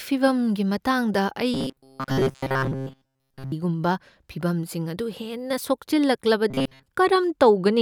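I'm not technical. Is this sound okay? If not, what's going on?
No. From 1.54 to 3.52 s, and again from 6.50 to 6.86 s, the speech turns into a flat, metallic buzz pitched at about 133 Hz. This is robotic sound from repeated short buffers, likely caused by audio arriving too slowly, so the player keeps repeating tiny slices of about 7.5 ms and skips most of the real sound. Unlike a dropout, it never goes silent. The buzz holds one fixed pitch while loosely following the speech.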